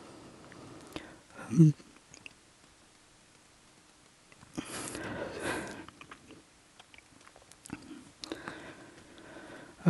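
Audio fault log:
No faults detected.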